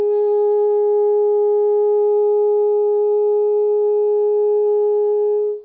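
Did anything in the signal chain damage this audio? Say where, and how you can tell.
No, nothing in this music stood out on listening as damage from any stage of the signal chain.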